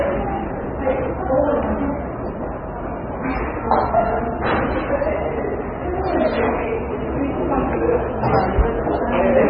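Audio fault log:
Throughout, MP3 compression: the audio has a hard ceiling near 5.2 kHz with nothing above it, and the remaining band sounds watery and swirly, with weak components flickering in and out between frames and transients smeared. Heavy damage of this kind is likely from MP3 encoding at a very low bitrate, consistent with around 16 kbps, where the encoder discards the treble and zeroes quieter spectral lines to stay within its bit budget.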